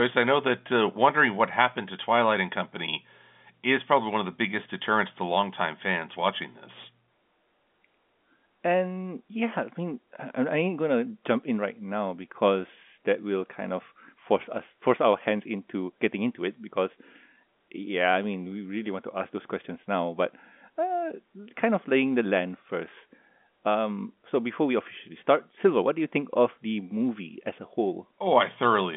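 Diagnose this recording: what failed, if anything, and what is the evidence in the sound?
Nothing stood out on listening; the speech has the narrow band of G.711 telephone coding, with nothing above 3.5 kHz, and no failure can be heard at any stage.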